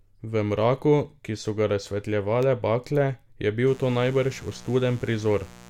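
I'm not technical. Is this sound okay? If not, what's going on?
No. Mains buzz runs from 3.67 s to the end. Electrical interference from the 60 Hz power supply leaks in, adding a steady, raspy buzz beneath the speech.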